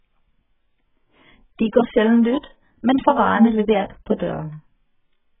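From start to end, the speech carries heavy AAC compression damage, likely from AAC-LC at a very low bitrate, around 8 kbps. Nothing sounds above 3.8 kHz. Starved of bits, the encoder strips detail. The sound is dull and smeared, with warbling, fizzy sibilants.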